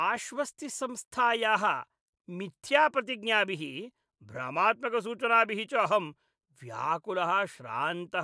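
No technical faults can be heard anywhere in this speech recording. Nothing in it calls for comment on the playback or recording chain.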